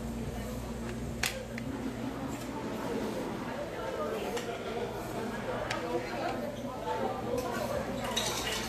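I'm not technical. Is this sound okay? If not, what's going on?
No, it has a grainy, hissy quality the whole way through, and nothing comes through above about 14.2 kHz, so the top end sounds dulled. That's likely Vorbis compression squeezed too hard, where fine high detail gets swapped for rough noise.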